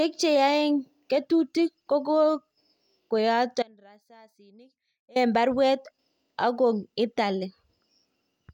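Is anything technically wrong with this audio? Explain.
Yes. From 3.63 to 5.16 s the speech drops out for about 1.5 s. This is an audio dropout to a faint residue. The likely cause is a lost signal feed while the path after the break stayed live. The gap holds only a faint sound, roughly 30 dB down. It cuts in and out abruptly, not like a pause or fade.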